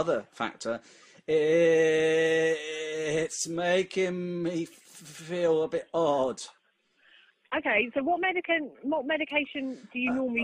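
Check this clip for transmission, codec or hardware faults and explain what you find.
No faults can be heard anywhere in this clip.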